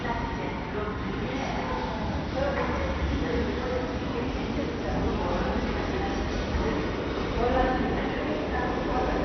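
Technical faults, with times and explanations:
throughout, MP2 compression: the encoder was likely starved of bits, which fits a rate near 48 kbps, so its upper sub-bands were switched off and the remaining ones coarsely quantised. Nothing survives above 6.2 kHz, leaving the sound dull, with heavy gurgling, granular distortion.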